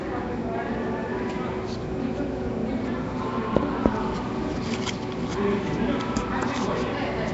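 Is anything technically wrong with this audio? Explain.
Yes. Throughout the recording there is plainly audible coding damage, most likely Nellymoser compression, the old Flash microphone codec. It spends a fixed, small bit budget on short blocks of samples, starving weaker frequency bands and filling them with synthetic noise, at a rate that fits roughly 32 kbps. The result is a rough, hissy haze around the sound and a smeared, underwater texture, with nothing present above about 7.7 kHz.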